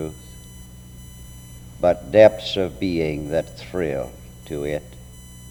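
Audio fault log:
Throughout, USB whine: a fixed tone at 1 kHz with harmonics, strongest at 11 kHz, about 25 dB below the signal. Current drawn in 1 ms bus frames leaks in through power or ground.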